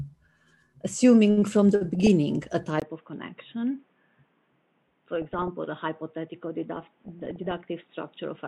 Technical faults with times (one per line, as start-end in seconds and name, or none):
1.95-2.08 DAB burbling
2.80-8.47 input switched to a poorer device
5.15-5.48 DAB burbling
6.76-7.68 DAB burbling